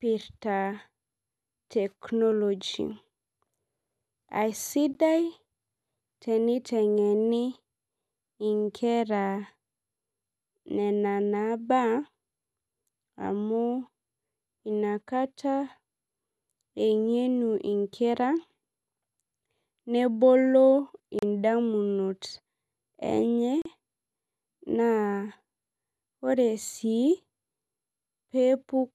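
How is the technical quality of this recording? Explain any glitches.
The speech is interrupted by three brief dropouts where separately encoded pieces were joined. Gap at a join of encoded pieces at 4.94 s (15 ms), 21.19–21.23 s (35 ms) and 23.62–23.65 s (37 ms): each piece kept its encoder start delay and final-frame padding, so the sound briefly cuts to silence with smeared edges and then resumes where it stopped.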